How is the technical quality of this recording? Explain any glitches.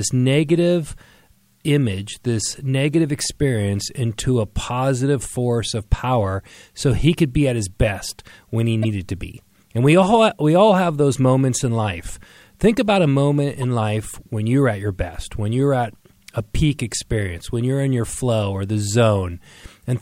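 The speech has two brief glitches, both corrupt frame decoded events. At 8.83 to 8.85 s and again at 13.57 to 13.64 s, flipped bits in about two and three compressed frames respectively were decoded anyway, misplacing energy in frequency. Each is heard as a short glitch, peaking around -15 dBFS and -20 dBFS respectively.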